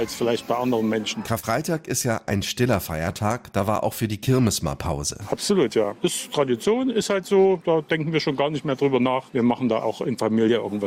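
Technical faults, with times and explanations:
1.39 to 1.46 s, short concealed packet loss: a brief smear and wobble where the sound seems to stretch for an instant before blending back into place. About 40 ms of the stream failed to arrive at the decoder in time, so the receiver filled the hole by extending what it had just played, synthesising roughly 32 ms of continuation and then blending that back into the genuine audio as it resumed.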